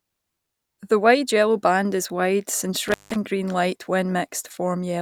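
At about 2.88 s the speech drops out, and it doesn't come back cleanly until around 3.16 s. That's an intermittent contact: a loose plug or cable briefly lost its connection. The actual break lasts about 164 ms, and you get a crackle as the contact scrapes open and again as it closes. While the line is open, all that's left is a faint hiss where the signal should be.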